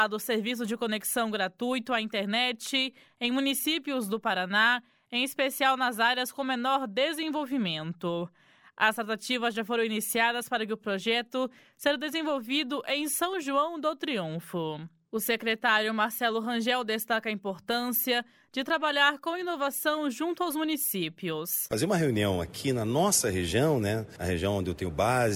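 Nothing technically wrong turns up anywhere in this audio, so there's no fault to point to here.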